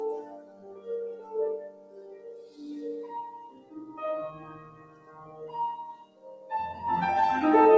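Throughout, the sound pumps and thins, with held parts and tails sinking while sharp onsets come through, a level swing of around 20 dB. A noise suppressor applied to music or sounds is the cause: a speech-tuned suppressor treats steady tones and ambience as noise to be removed.

The suppressor cut sound in six spots: 0.22 to 0.87 s (about 10 dB deepest drop), 1.17 to 1.34 s (about 6 dB), 1.61 to 2.58 s (about 11 dB), 3.51 to 3.74 s (about 9 dB), 4.62 to 5.40 s (about 8 dB) and 6.05 to 6.50 s (about 10 dB). In each, sustained sound sags or its decay is cut short.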